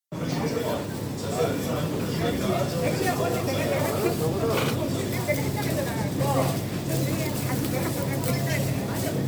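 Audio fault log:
Throughout: generation loss. The sound is swirly, hollow and smeared, with blurred attacks, and it's rougher than a 128 kbit/s MP3 alone would give. That's likely around five MP3 re-encodes, each quantising on a shifted frame grid and piling up noise and spectral holes.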